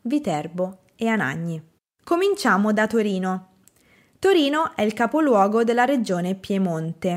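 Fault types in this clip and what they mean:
No technical fault can be heard anywhere in this speech recording. There is nothing to list by type.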